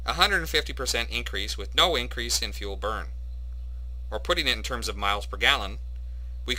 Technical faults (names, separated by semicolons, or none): crude rate conversion